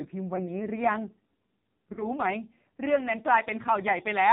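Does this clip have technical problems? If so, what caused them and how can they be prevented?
Yes. Throughout, the AMR narrowband mobile codec cuts everything above 4 kHz and makes the speech heavily buzzy and synthetic, which fits a low mode of around 5.9 kbps. A higher-rate mode or a wideband codec prevents this.

Lost AMR speech frames cause brief warbling dips at 0.36 to 0.41 s and 1.94 to 2.06 s, each consistent with one dropped frame that the decoder concealed with fading extrapolation. A stronger radio link or better channel coding prevents these.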